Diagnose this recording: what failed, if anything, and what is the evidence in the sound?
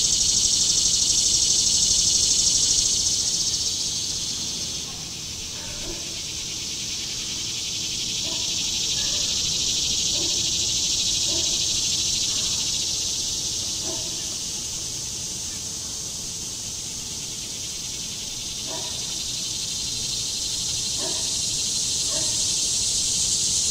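Nothing failed here; the audio holds together the whole way, with nothing in it that points to a problem at any stage of the chain.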